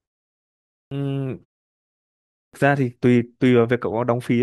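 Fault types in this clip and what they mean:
Clipped start after a pause: speech at 0.83 s and 2.45 s bursts abruptly out of silence with its opening sounds missing, roughly 83 and 85 ms gone. After pauses of 0.83 and 1.08 s, the sleeping output device needs that long to wake and lock.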